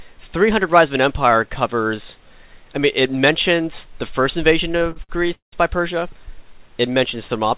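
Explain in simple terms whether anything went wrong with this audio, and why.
Between 4.72 and 5.54 s the audio suffers repeated stalls (stutter): seven times it briefly freezes and stretches the last sound, the longest hold about 0.18 s, covering nearly half that stretch. Unlike dropouts, nothing is lost; it drags, then resumes where it left off. Throughout, the call connection's codec removes everything above 4 kHz.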